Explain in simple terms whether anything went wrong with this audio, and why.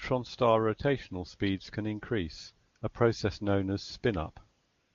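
Something went wrong: AMR comfort noise. Between "rotational speeds can increase" and "a process known as", at 2.73 s and again from 2.77 to 2.81 s, and at the very end from 4.65 s, the phone treated the talker as silent. It stopped sending real sound and played a smooth, steady synthetic hiss instead. Unlike a plain dropout, which leaves dead silence, the gap is filled with this even noise that switches in and out, replacing the true background.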